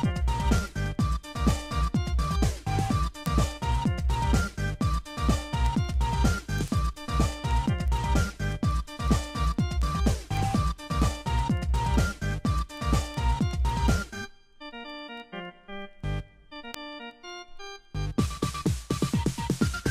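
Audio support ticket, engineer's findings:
Word clock ticks, 0.12 to 19.88 s: sharp ticks about ten times a second, roughly two hundred in all, uneven in strength. Receiver is free-running, not locked to the sender's clock. Each slip drops or repeats one sample. Rate suggests a clock mismatch of a few hundred ppm. Unlike random crackle or dropouts, the spacing stays strictly regular across the whole clip and there is no gap in the sound.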